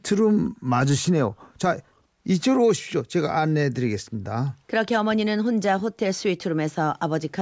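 Nothing in the signal of this speech recording points to a technical fault, with no break, distortion or added disturbance at any point.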